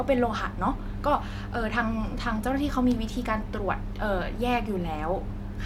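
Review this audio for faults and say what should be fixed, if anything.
No faults found; nothing to fix.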